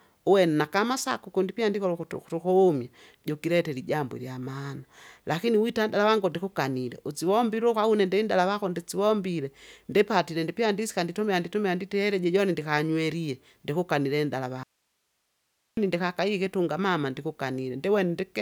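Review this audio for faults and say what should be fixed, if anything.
An audio dropout to a faint residue runs from 14.63 to 15.77 s, between "joni ndikanywelie ndikukanile inndala" and "ndikakaiye ikitunga mama". The speech cuts abruptly to hiss about 50 dB down for roughly 1.1 s, most likely a brief signal loss upstream while the path stayed live. On a waveform it is a sudden flat near-silent strip, and on a spectrogram a sharp-edged band of faint broadband noise. Securing connections and monitoring the input level during recording would prevent it.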